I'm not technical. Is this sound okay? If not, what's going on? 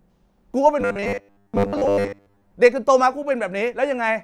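No. From 0.81 to 2.51 s the speech becomes a stiff, metallic buzz. This is robotic sound from repeated short buffers. New audio likely arrives too slowly, so tiny 10 ms pieces get replayed. That forces a fixed 100 Hz drone over most of that stretch.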